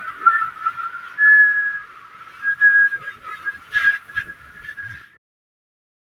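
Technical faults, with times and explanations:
Throughout: noise suppressor applied to music or sounds. A speech-tuned suppressor treats steady sound as noise, so gain swings by roughly 20 dB and sustained parts pump and thin. On a spectrogram, held energy dims between brighter onsets; the waveform envelope breathes unevenly.
0.94–1.17 s, 1.85–2.42 s, 4.35–4.59 s, 4.99–5.18 s: sound cut by the noise suppressor. Here the suppressor judged the sound to be noise and pulled it down by about 6 dB. The waveform shows sagging amplitude, and the spectrogram shows faded patches after each onset.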